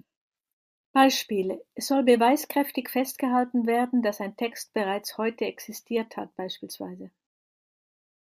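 Speech recording with no audible technical faults.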